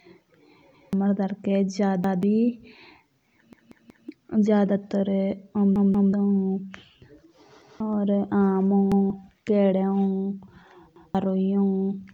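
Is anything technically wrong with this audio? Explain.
Yes. The speech stutters seven times: at 0.74 to 0.93 s, 2.04 to 2.23 s, 3.53 to 4.09 s, 5.76 to 6.13 s, 7.62 to 7.80 s, 8.92 to 9.10 s and 10.96 to 11.15 s. In each, a 186 ms fragment plays again with a hard join, twice over at 5.76 s and three extra times at 3.53 s. This is a repeated buffer, which fits an 8192-sample buffer. Fresh audio arrived late, so the device replayed its last block, and the speech that should have filled that time, roughly a fifth to half a second each time, is lost.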